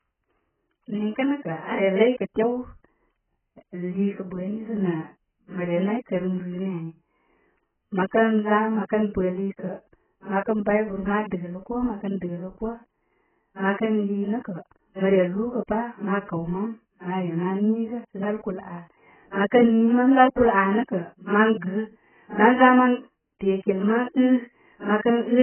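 AAC compression runs throughout the clip. The speech has nothing above 3.1 kHz and sounds dull and smeared, with a warbling, fizzy texture on sibilants. The likely cause is AAC-LC squeezed to a bitrate near 8 kbps, forcing a low cut-off and hollowing the spectrum.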